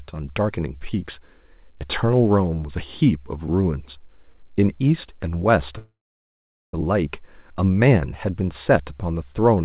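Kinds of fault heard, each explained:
Call audio freeze: speech stalls 5.78 to 6.74 s with a brief fill, then 0.81 s of silence, likely a starved jitter buffer; it resumes with nothing missing.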